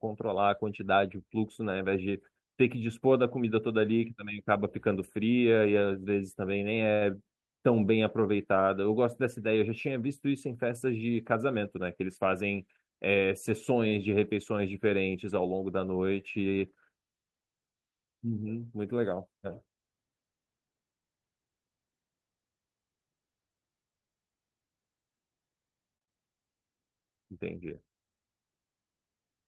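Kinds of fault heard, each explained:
Jitter buffer speed-up, 11.57 to 12.41 s: the receiver's jitter buffer had built up more audio than its target, so it repeatedly trimmed short slices of one or a few pitch periods to bring the delay back down. Here the speech runs at 105% of its normal rate for that stretch, with roughly 50 ms cut in total. The pitch stays the same, but the phrasing sounds slightly rushed.
Short stall from a late packet, 13.88 to 13.94 s: a packet missed its playout time, the jitter buffer ran dry, and the receiver stretched the last sound until the data turned up, then carried on from the same point. In this clip the stretch fills 37 ms and no audio is lost, so the sound is held briefly too long with a faint buzz or dip, and the playout delay grows by 37 ms.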